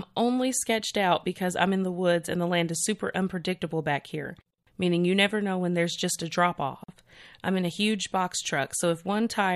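At 6.84 s, after "there's just a drop" and before "I'm in a huge", a gap at a join of encoded pieces opens: a gap of about 44 ms where separately encoded segments were butted together with their encoder delay and end padding left in. Unlike a dropout, no sound is lost; the speech resumes exactly where it stopped, across smeared edges.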